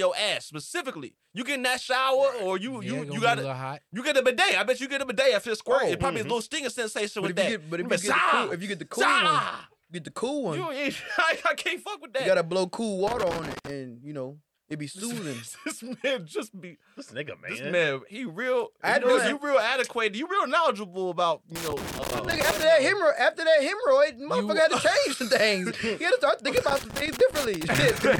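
Loose connector crackle breaks in at 13.07 to 13.70 s, 21.56 to 22.63 s, and 26.57 s to the end. A worn contact keeps making and breaking, chopping the signal into irregular scratchy bursts.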